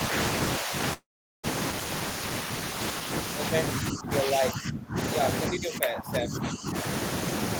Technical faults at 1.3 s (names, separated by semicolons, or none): long network dropout